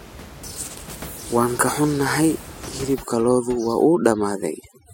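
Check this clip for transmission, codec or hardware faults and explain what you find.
One fault: overdone noise removal, from 2.94 s to the end of the clip. A noise reduction stage is acting far too aggressively on this speech. It treats any frequency band that falls close to its noise estimate as noise and pulls that band sharply down or out entirely. The quieter parts of the speech are cut along with the background. The gaps between phrases drop to near silence scattered with twinkling specks. Before this point, the room noise sits about 17 dB below the speech as ordinary background.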